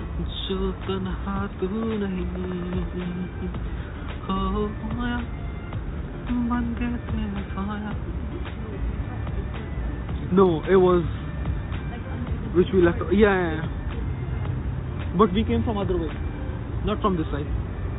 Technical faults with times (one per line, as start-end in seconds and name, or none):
none